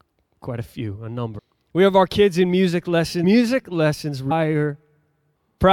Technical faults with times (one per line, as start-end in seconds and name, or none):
1.37 compressed frames skipped
3.23 compressed frames skipped
4.30 compressed frames skipped